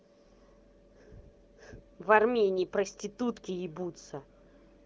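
No faults are audible: the speech carries the band-limited sound of the AMR wideband (HD Voice) codec, with nothing above about 7.4 kHz and at most faint coding texture, which fits one of the higher AMR-WB rates.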